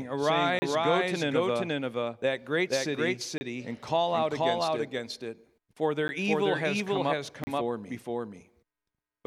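Speech carries a doubled audio track throughout: a second, full-band copy runs about half a second behind at roughly equal loudness. Unlike a room echo, it has no decay or added room colour. The likely cause is the signal being captured twice, once through a slower path. Blocks of digital silence also cut in at 0.59 to 0.62 s (30 ms), 3.38 to 3.41 s (30 ms), at 6.08 s (10 ms) and at 7.44 to 7.47 s (32 ms). Each cuts out and returns with no fade, which separates these from softened dropouts or concealed packet loss.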